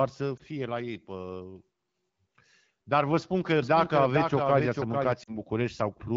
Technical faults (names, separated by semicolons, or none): lost AMR speech frames; doubled audio track